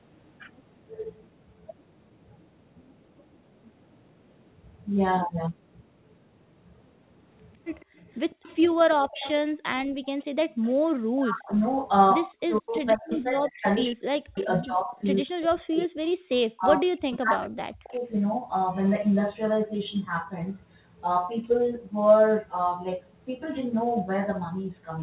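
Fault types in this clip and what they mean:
Echo leak: From 7.8 to 11.74 s, 13.55 to 14.43 s and 17.13 to 17.94 s, a faint copy of the speech trails it by 154 ms, at about 20, 30 and 25 dB below the speech. This is likely loudspeaker sound on the far side that its echo canceller failed to remove and sent back.
Background gated by the echo canceller: Between 8.77 and 10.63 s, the room sound drops out briefly, by up to about 40 dB, for about a third of a second in all. The canceller clamped the microphone down while the loudspeaker was playing and released it afterward.
Speech suppressed in double talk: From 10.93 to 18.05 s, the speech dips and breaks up in pieces, falling by up to around 40 dB, for about four seconds in total. Both sides were likely talking at once, so the canceller turned the talker down along with the echo.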